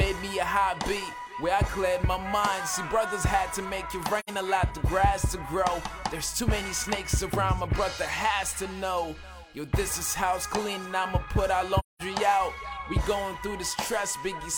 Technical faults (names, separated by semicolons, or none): AAC frame loss with muting